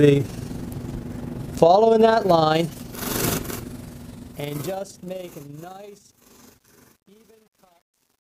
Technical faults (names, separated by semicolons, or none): overlap-add ripple